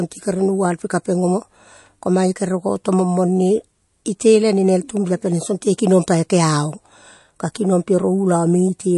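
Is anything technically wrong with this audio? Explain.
Yes. MP3 compression damage runs through the whole speech clip. Nothing is present above 11.3 kHz, a hard treble cut of the kind an MP3 encoder imposes when bits run short. Its hearing model also discards weak frequency lines, which drop in and out from frame to frame. The result is a plainly audible watery, swirling quality and smeared attacks, likely from encoding at a low bitrate around 48 kbps.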